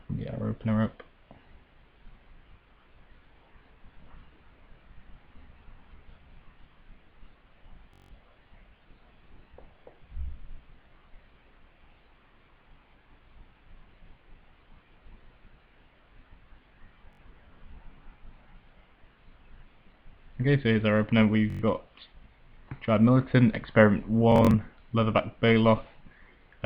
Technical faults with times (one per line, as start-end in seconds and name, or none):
7.93-8.12 Bluetooth stutter
17.13-17.21 Bluetooth stutter
21.50-21.62 Bluetooth stutter
24.32-24.55 Bluetooth stutter